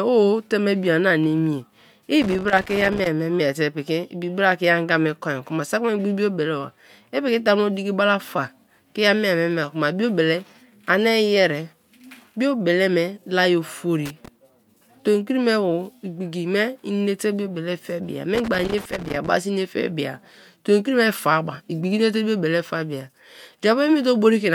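Loose connector crackle breaks into the speech three times: from 2.22 to 3.07 s, just before "ma miete"; from 14.06 to 14.28 s, right after "me laye"; and from 18.35 to 19.28 s, following "inate biobele fe meya". A worn or dirty contact is making and breaking as it moves, chopping the signal into an irregular scratchy burst. On a spectrogram each burst shows as scattered broadband vertical streaks. The waveform looks ragged and interrupted through those spans.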